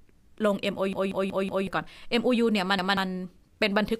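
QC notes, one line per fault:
0.93–1.67 s, repeated buffer: fresh audio arrived late, so one chunk of about 186 ms plays five times in a row. This suggests an 8192-sample buffer. The result is a stutter with a hard join at each repeat, and about 0.7 s of speech skipped. The waveform shows identical blocks, and the spectrogram a copied pattern cut by vertical seams.
2.79–2.97 s, repeated buffer: a 186 ms chunk plays one extra time before new audio resumes, giving a brief stutter with a sharp seam at the join and about 0.2 s of speech missing. The waveform shows two matching blocks, and the spectrogram a duplicated slice with vertical edges.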